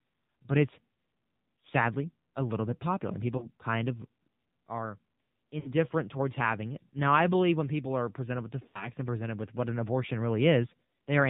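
Throughout, the speech carries the sound of an AMR narrowband mobile codec. Nothing above 4 kHz gets through. Voiced sounds turn buzzy and synthetic as the vocal tract model is driven by sparse pulses. The damage is plainly audible and points to a low rate near 7.4 kbps.

Lost AMR speech frames break the audio three times: 3.38 to 3.49 s, 5.60 to 5.73 s, and 8.68 to 8.90 s. The decoder repeats the last pitch and tract settings at falling gain. Each gap smears, then fades. The gaps fit two, three and three 20 ms frames.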